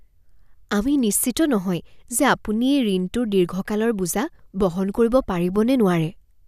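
Nothing stood out on listening to this speech recording.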